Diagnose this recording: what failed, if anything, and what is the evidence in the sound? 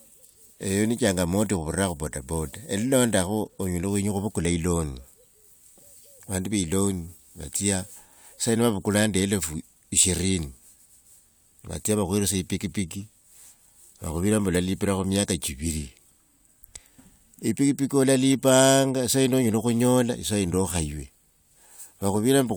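Nothing here seems to have gone wrong at any stage of the chain, since the speech carries on steadily with no interruptions or damage to point to.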